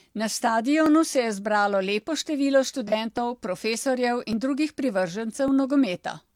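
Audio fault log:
0.86–5.48 s, clock drift buffer slips: A short click or tick recurs about every 1.16 s, around five times across this span. The steady spacing likely comes from two devices running on separate clocks, roughly a thousand ppm apart, so the buffer between them drifts until a few dozen samples are dropped or repeated. On a waveform each slip is a small discontinuity or step. On a spectrogram it is a thin vertical broadband line at regular intervals.
2.88–2.93 s, AAC frame loss with concealment: A 42.7 ms patch sounds smeared and noisy or phasey, which fits a single lost AAC frame. The decoder filled the gap from the last good spectrum instead of going silent, so the audio there holds its rough loudness but loses clean detail. A spectrogram shows a brief block where harmonic lines blur into diffuse, noise-like energy. The waveform envelope stays continuous, but the fine structure turns irregular.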